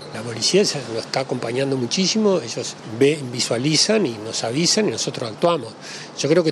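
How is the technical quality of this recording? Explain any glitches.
One glitch stands out: a GSM phone buzz from 4.06 to 4.86 s. A nearby 2G handset on a call sent radio bursts 217 times a second, which the audio circuitry rectified into a steady, hard, raspy buzz about 23 dB below the sound. A spectrogram shows a comb of harmonics spaced 217 Hz apart, and the waveform shows a regular pulse train riding on the signal.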